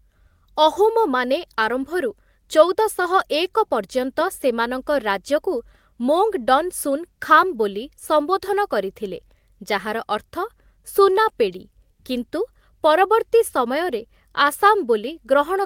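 No technical faults are audible anywhere in the speech.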